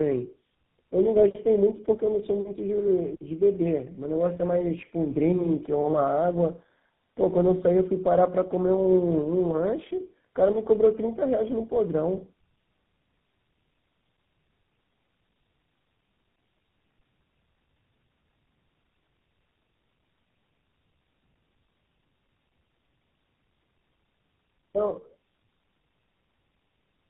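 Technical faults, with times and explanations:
Throughout, tandem speech coding: the speech passes through two low-rate speech codecs in sequence, consistent with a G.729-type coder followed later by GSM full rate. The second re-encodes the first's errors, so voices sound rough, muffled and warbly. A spectrogram shows nothing above 3.8 kHz and smeared, blotchy formant bands.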